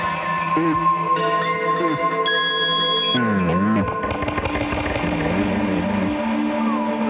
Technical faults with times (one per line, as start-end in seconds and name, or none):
none